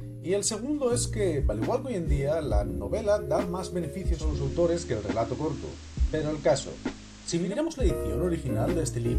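At 4.09 s, over about a quarter of a second, a hiss, roughly 25 dB below the signal, rises underneath and the level shifts by about 1 dB. At 7.61 s the hiss falls away. This is digital radio blending to analogue: the receiver lost the digital stream and cross-faded in 269 ms to the station's FM broadcast, then switched back.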